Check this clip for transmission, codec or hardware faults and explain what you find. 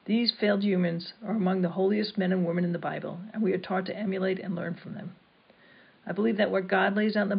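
Nothing here points to a transmission, codec or hardware problem; the audio just runs along without any glitch worth flagging.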